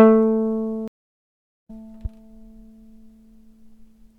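A stream reconnect runs from 0.88 s to 1.70 s in this short piece of audio. The connection dropped and the player fell silent for 772 ms, then reconnected and began decoding afresh partway through the stream. When sound returns, it fades back in and picks up roughly half a second further on than where it broke off, so that stretch of material is simply missing. A loud pop follows at 2.05 s to 2.08 s, a single sharp pop standing a few decibels above the surrounding sound, which carries on uninterrupted beneath it. This is likely a sudden voltage step or pulse entering the signal path, from something such as a switch, a plug, static discharge or a driver glitch, with the downstream circuitry shaping it into a brief, percussive click.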